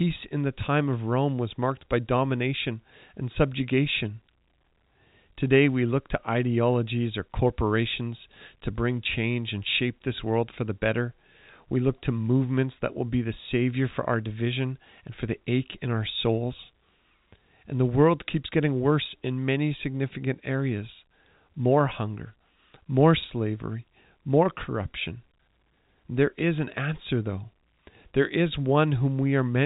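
No technical faults can be heard anywhere in the speech. The G.711 A-law telephone coding is audible only as a band that stops at 4 kHz, with at most a faint quantisation hiss far beneath the speech that rises and falls with its level.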